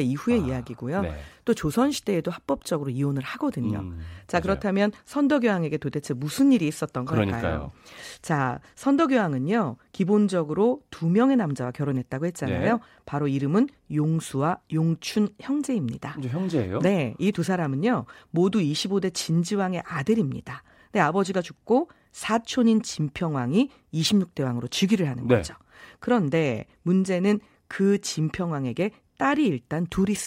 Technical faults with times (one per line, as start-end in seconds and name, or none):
none